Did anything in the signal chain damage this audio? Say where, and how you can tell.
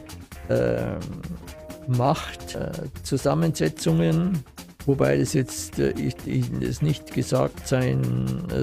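Yes. Compressed frames are skipped at the codec stage at 2.54 s. The audio jumps ahead roughly 150 ms, which fits several 32 ms frames.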